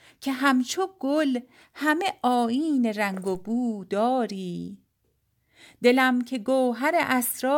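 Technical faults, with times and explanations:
3.35 s: DC step. The zero line of the speech waveform jumps suddenly, by about -36 dBFS. That abrupt shift is heard as a brief low thump or click. The speech carries on unchanged across it. The offset does not hold. It drains away slowly, the way a high-pass filter near 2 Hz would pull it back to zero. Because that decay is so slow and low, it makes no further sound after the initial step.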